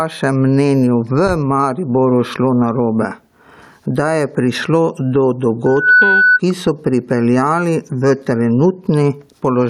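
Gain pumping runs through the whole speech clip. The gain swings by around 10 dB, so loud and quiet passages sit unnaturally close in level and the sound feels squashed and breathing. The likely cause is microphone gain set far too high, with a fast limiter or compressor clamping down on each loud syllable and releasing in the gaps.

From 5.66 to 6.40 s, right after "da je prišlo do", a loudspeaker feedback squeal appears as a single steady tone at 1.5 kHz. It swells over roughly a third of a second to about 10 dB above the speech, then stops just before "ki so pripeljali v". The microphone was picking up the loudspeaker it was driving, and at 1.5 kHz the loop gain went above one, so that frequency fed on itself until it stopped.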